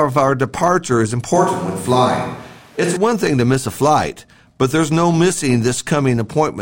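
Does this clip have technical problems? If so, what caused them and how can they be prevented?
Yes. From 1.36 to 2.97 s the speech turns suddenly roomy and hollow, with thinner bass and background noise roughly 30 dB below it, at about the same level. The likely cause is a switch to a distant microphone after the close one dropped out. A spectrogram shows weaker low frequencies, a higher noise floor and smeared reverberant tails, with abrupt edges at both ends. Monitoring the close microphone and keeping a backup lavalier or recorder running prevents this.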